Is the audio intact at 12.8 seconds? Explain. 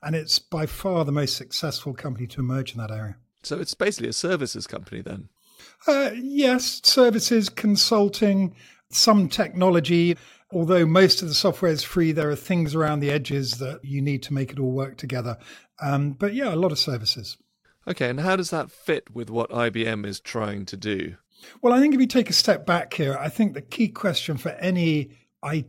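No. 12.8 seconds falls inside a burst of CD scratch ticks running from 11.57 to 13.75 s, between "most of the" and "you need to make". A blemish on the disc wipes out more data than error correction can rebuild on each rotation, so the player patches or mutes those samples. The result is eleven brief ticks, the longest only a few milliseconds, spaced regularly at about five per second. That steady rotational spacing separates them from random clicks or crackle.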